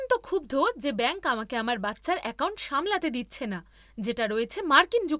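No technical faults can be heard in the speech at any point.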